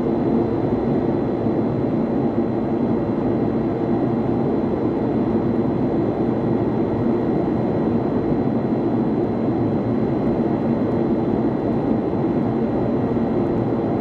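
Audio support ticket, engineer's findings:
Frames out of order, two events: adjacent frame runs delivered and decoded swapped, likely a packet reordering issue upstream of the decoder. 11.03 to 11.23 s, halves of about 93 ms exchanged; 13.51 to 13.57 s, about 46 ms halves. Garbled flutter, no time lost.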